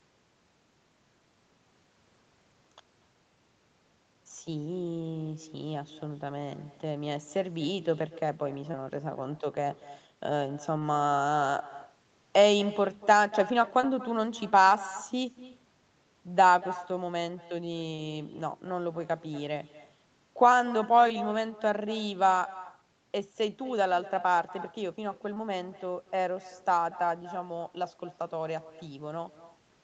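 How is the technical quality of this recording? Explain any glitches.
The recording has two problems: a constant echo and six brief dropouts. The audio is speech carried over an Opus call path, and nothing appears above 8 kHz.

Echo with no canceller runs throughout. The far end's loudspeaker feeds its microphone, so a thin copy returns about 17 dB quieter and roughly a fifth of a second late. On a spectrogram it appears as a faint, delayed duplicate of every syllable.

Short concealed packet loss occurs at 8.71, 10.79, 13.81, 17.95, 21.08 and 25.34 s. The decoder extrapolated across 20 ms gaps, and a 40 ms gap at 17.95 s. Each sounds like a brief smear or wobble and shows as a smoothed, blurred sliver in the spectrogram.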